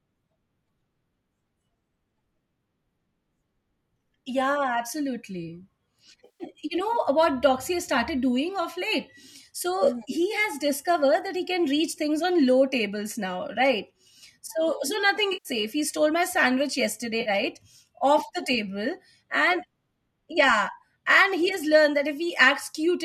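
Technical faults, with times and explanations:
6.25–6.44 s, 15.33–15.49 s (between "so so nothing" and "safe he stole my"), 17.21–17.30 s: AAC frame loss with concealment. The decoder, likely low-delay AAC, repeats the last good spectrum for 150, 120 and 50 ms, so each gap sounds smeared and phasey. On a spectrogram each appears as a blurred, streaky block with little harmonic detail.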